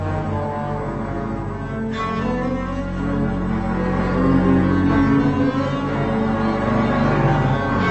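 The whole clip suffers from stereo read as mono: interleaved left and right samples are played back one after another as a single channel, so everything runs at 0.5x speed and sits 12 semitones low. On a spectrogram, a fainter mirrored copy fills the upper half of the band.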